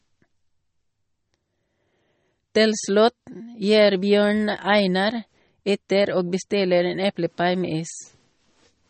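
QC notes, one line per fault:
Throughout: MP3 compression. The speech sounds watery and swirly, s sounds carry a metallic chirp, consonant attacks smear, and nothing is heard above 8.4 kHz, so the top end is dull. These are likely the marks of an MP3 encoder short of bits. It cut the treble at a fixed point and dropped weaker frequency lines, which flicker on and off between frames, a level of damage that fits a low bitrate near 32 kbps.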